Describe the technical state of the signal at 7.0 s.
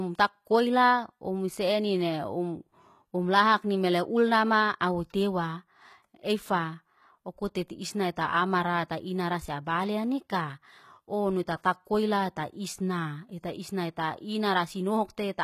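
The speech at 7.0 s, as across the whole clip, has likely passed through HE-AAC compression at a very low rate, around 20 kbps. Its treble is rebuilt from copied lower bands rather than coded, so s sounds come out gritty and lispy, with nothing above 14.9 kHz.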